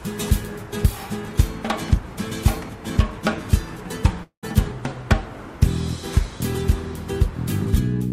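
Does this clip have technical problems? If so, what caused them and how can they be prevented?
Yes. From 4.23 to 4.45 s there is a long network dropout. The sound gives way to a buzzy continuation of the last moment that fades, then roughly a tenth of a second of near silence, and about 0.2 s of the original audio is gone when it resumes. The likely cause is packets lost in transit, with the receiver concealing the gap. A spectrogram shows smeared, repeated bands fading into a dark gap; the waveform shows a decaying envelope dropping almost flat. A larger jitter buffer, forward error correction or a more stable connection would prevent this.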